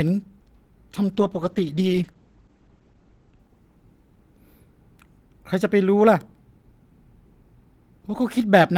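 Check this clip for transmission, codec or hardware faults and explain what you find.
One transmission fault is present: a call bitrate drop from 1.15 to 4.71 s. The speech loses its top end, and high frequencies are cut off above 8 kHz instead of reaching 20 kHz. The sound turns muffled and rough, bottoming out for about 1.75 s. The bandwidth estimate fell, so the encoder coded more coarsely. That fits a fall from roughly 32 to 11 kbps.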